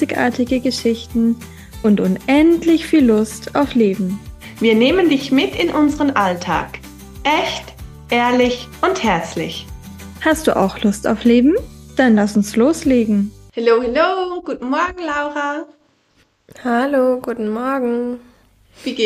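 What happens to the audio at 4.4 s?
Nothing goes wrong at 4.4 s: the audio plays through that moment intact, with no dropout, click, distortion or other fault.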